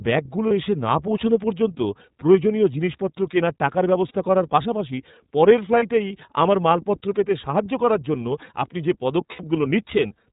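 The speech is band-limited and slightly rough and synthetic throughout, with nothing above 4 kHz and a rough, synthetic edge to the voice that is plainly audible. This is the iLBC codec. It is a narrowband VoIP coder that encodes each frame's excitation independently, and the sound fits its 30 ms frame mode at 13.33 kbps.

At 0.48, 4.08 and 5.79 s there are brief holds of about 30 ms where the voice freezes into a short, faintly buzzy vowel-like tone. At 9.32 s a similar hold lasts about 60 ms. These are lost iLBC frames. The decoder covers each gap by repeating the last pitch cycle mixed with noise, and the short holds fit single lost 30 ms frames, while the longer one fits two. Because every frame decodes independently, the voice snaps back to normal right after each gap.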